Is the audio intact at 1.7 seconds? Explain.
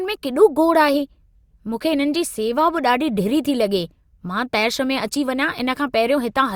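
Yes, at 1.7 seconds the speech runs on cleanly, with no dropout, click, distortion or other fault to be heard.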